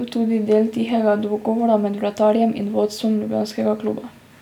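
Speech recording, with nothing technically wrong to point to. No faults can be heard anywhere in it.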